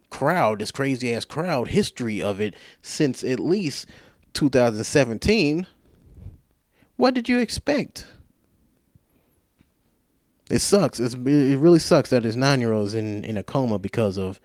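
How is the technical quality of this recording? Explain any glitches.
The recording has a timing problem rather than a tonal one: the two clocks disagree, and the receiver keeps patching the difference with small edits.

Clock drift between sender and receiver affects the whole clip. The sender's clock runs about 1% slow, so the receiver's jitter buffer keeps draining. The pacing feels faintly unsteady throughout. On a waveform, the speech envelopes show slight irregular stretching rather than a clean, even rhythm.

Repeated timing corrections run from 0.38 s to 13.75 s. To cover the shortfall, the receiver repeats short pieces of audio, adding roughly a tenth of a second overall and leaving the speech at about 99% speed. A spectrogram shows tiny duplicated slices at uneven intervals.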